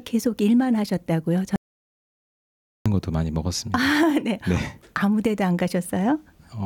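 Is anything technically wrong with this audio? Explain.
Yes. From 1.56 s to 2.86 s there is an audio dropout to silence: the input was likely lost, through a disconnected device or failed link, while recording continued writing silence. The sound cuts off abruptly into about 1.3 s of total silence, with no room tone, then resumes mid-flow.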